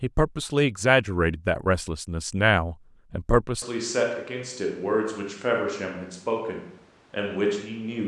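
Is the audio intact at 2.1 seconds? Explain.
Yes, the speech at 2.1 seconds comes through intact, with no dropout, click, distortion or other fault at that moment.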